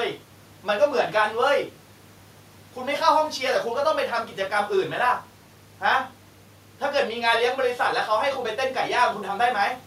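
No technical faults are present in this speech clip; the only background is the room's own noise, sitting about 32 dB below the speech.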